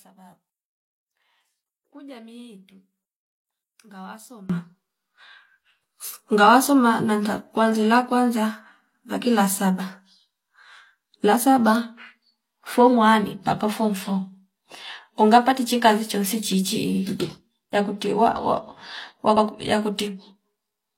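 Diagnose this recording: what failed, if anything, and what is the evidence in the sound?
From 0.0 to 4.5 s the mono sum drops about 25 dB and the speech becomes faint. This is likely one channel inverted in the analogue wiring, so common content cancels.

Repeated frames from the codec or storage stage cause a stutter after "unga patichi kazi chonsi" at 16.91 s, replaying 46.4 ms, and at 19.32 s, replaying 92.9 ms.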